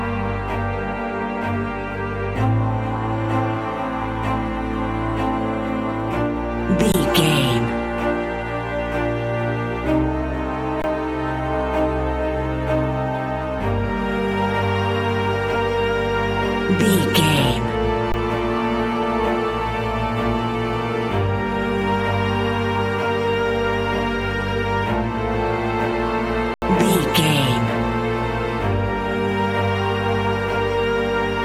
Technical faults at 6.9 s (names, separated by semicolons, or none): underrun with held sample